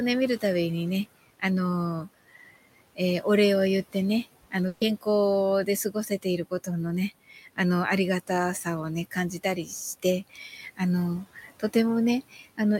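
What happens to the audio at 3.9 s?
At 3.9 s, as throughout the clip, a noise suppressor is pulling down each frequency band it judges to be steady noise, by about 17 dB. The room noise, about 20 dB below the speech, dips in the pauses and swells under the speech.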